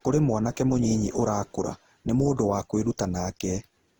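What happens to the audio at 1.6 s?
Generation loss is present at 1.6 s, as it is across the whole clip. The speech sounds swirly, hollow and smeared, with blurred attacks, most likely from around seven rounds of decoding and re-encoding with a lossy codec such as Opus at roughly 48 kbit/s. Each pass re-quantises on a shifted frame grid, so noise accumulates.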